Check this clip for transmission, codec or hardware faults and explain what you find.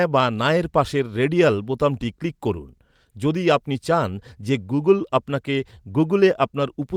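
Nothing faulty can be heard anywhere in this speech.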